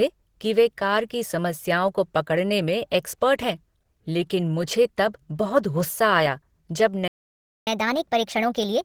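A speech recording whose whole length sounds grainy, rough and hoarse despite its full bandwidth, likely from Opus compression at 16 kbps in its hybrid mode. Right after "आया जब" the sound cuts to silence from 7.08 to 7.67 s, a gap of about 0.59 s, from a playback stall where the player likely ran short of data. From 7.67 s to the end, the speech runs 1.25 times too fast and roughly four semitones higher, as the player catches up at higher speed on its backlog.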